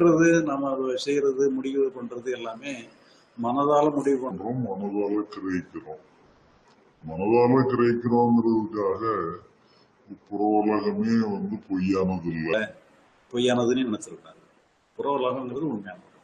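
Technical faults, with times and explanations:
4.31–12.54 s, section at the wrong speed: likely played against a mismatched clock at 0.76× speed, so this stretch drags and drops about five semitones.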